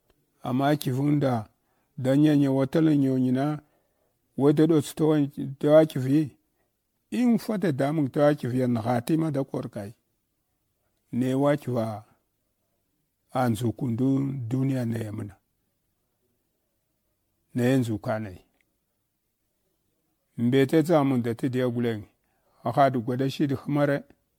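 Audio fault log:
throughout generation loss: swirly, hollow and smeared speech with softened consonant attacks, worse than one MP3 pass at a rate like 96 kbit/s would leave, which points to around ten re-encodes likely stacking quantisation noise and spectral holes; content stops near 19.9 kHz.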